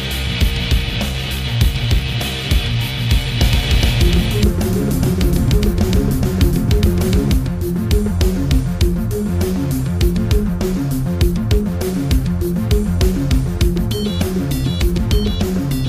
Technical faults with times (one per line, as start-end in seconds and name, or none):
3.41-7.33 doubled audio track